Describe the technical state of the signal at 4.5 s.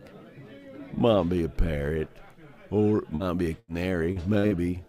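Short concealed packet loss: about 40 ms of audio failed to reach the decoder in time at 4.39 to 4.46 s, and again at 4.47 to 4.54 s. Each gap was filled by extending the preceding sound, pitched or as shaped noise, then blended back, leaving a brief smear or wobble.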